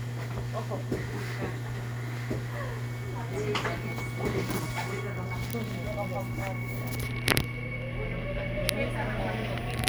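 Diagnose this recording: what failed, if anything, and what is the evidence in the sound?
Nothing in the recording points to a failure at any stage, from capture through conversion, processing, transmission, storage or playback, and the everyday sounds it holds come across with a continuous, stable signal.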